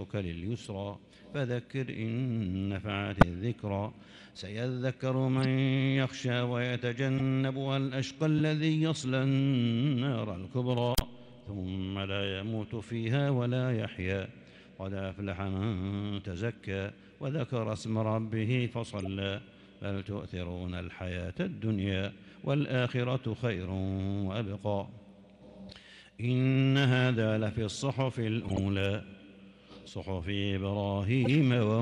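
Corrupt frame decoded at 3.21, 5.38, 7.18, 8.38, 18.99, 28.45 and 31.24 s: damaged frames were still decoded, giving short chirps and blips that appear as brief, misplaced spectral smears.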